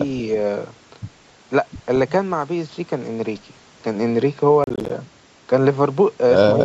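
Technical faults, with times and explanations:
4.64 to 4.90 s, processor overload crackle: buffer deadlines are missed back to back, each leaving a hard-edged silent gap of roughly 10 ms, about ten in a row, heard as gritty crackle over the speech. Unlike scattered packet loss, it comes as one dense burst.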